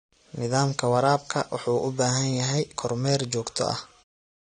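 Throughout, the speech sounds dull and smeared with a fizzy, warbling edge, likely from AAC compression at a low rate, which fits about 32 kbps. On a spectrogram everything stops sharply at 9.7 kHz. The level then fades smoothly out from about 4.0 s to 4.04 s.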